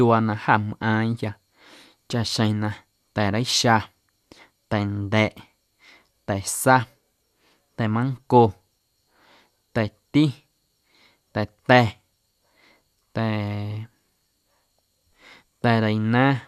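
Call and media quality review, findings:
Speech recording reviewed; no audible faults found.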